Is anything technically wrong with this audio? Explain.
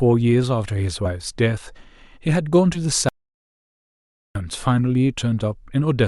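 Yes, there are two kinds of trouble in this speech clip.

First, compressed frames skipped, at 1.05 s and again at 2.74 to 2.78 s. Whole chunks of the coded stream never get decoded, either missing or thrown out as damaged, so playback jumps forward. The frames here are 10 ms long. The first jump loses a couple of frames, around 20 ms of speech, and the second loses about three, around 30 ms.

Second, an audio dropout to silence from 3.09 s to 4.35 s, so roughly 1.27 s gone. The speech cuts off mid-flow and the gap is dead digital silence, with no room tone at all, before the sound picks up again. That points to the input likely being lost, through a dropped device or link or an accidental mute, while the recorder kept writing silence. Whatever was said in that stretch isn't recoverable.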